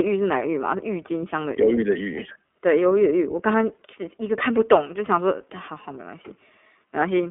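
Throughout the clip the speech passes through the iLBC codec, coding each 30 ms frame independently at a rate that fits 13.33 kbps. Nothing above 3.7 kHz survives, leaving a thin 250 Hz to 3.4 kHz band, and the voice sounds plainly rough and synthetic.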